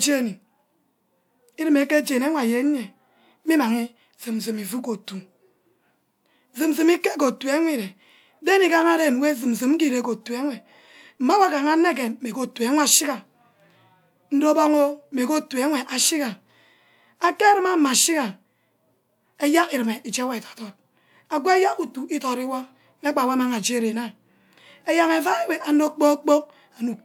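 No technical faults can be heard in this recording.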